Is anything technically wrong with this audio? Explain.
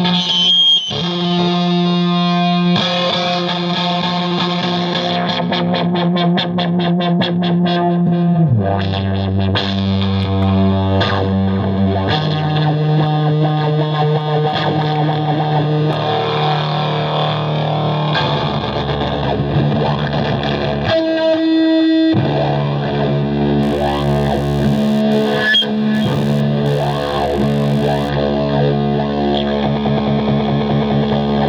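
Yes, there is one fault. Computer activity noise runs from 23.62 to 28.10 s. Load swings in the processor, graphics card or mouse disturb the ground the audio circuit shares. This adds a buzzy, scratchy chatter pulsing around 70 times a second, roughly 25 dB below the sound and unrelated to it.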